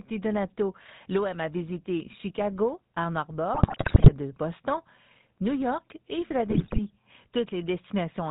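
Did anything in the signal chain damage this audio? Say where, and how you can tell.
Yes. At the codec stage, the whole clip carries GSM full-rate codec damage: buzzy, gravelly speech with nothing above 4 kHz, which fits a 13 kbps regular-pulse-excited vocal-tract model.

On the network link, GSM bit errors cause squawks, pops and gargling from 3.54 to 4.12 s and 6.50 to 6.79 s. Corrupted filter, pitch or gain parameters distort whole frames.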